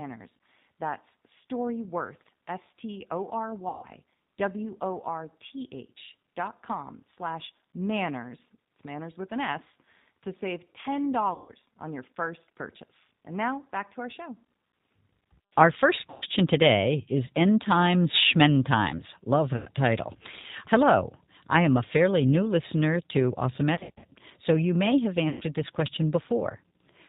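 A speech recording, carried through the G.729 codec at 8 kbit/s for its whole length. Nothing above 4 kHz survives. Each frame is rebuilt from a filter, a pitch predictor and a few pulses, so the voice sounds rough and plainly synthetic. VoIP packet loss concealed by the speech codec strikes at 3.69, 11.34, 16.10, 19.56, 23.75 and 25.29 s. Each gap lasts 100 to 200 ms. The decoder stretches its last sound into a fading buzzy tone or coloured noise. The voice stays weak or distorted just after the gaps, as "on your first purchase", "today is" and "so you may have" begin.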